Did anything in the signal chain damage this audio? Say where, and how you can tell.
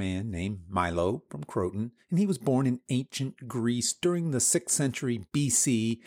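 No, nothing in the chain damaged this recording.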